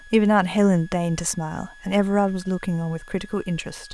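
A switching supply whistle runs through the whole speech clip: a thin high tone wandering between 1.66 and 1.69 kHz, roughly 25 dB below the voice, from a power supply cycling at an audible rate. A spectrogram shows a faint, slightly wavering horizontal line.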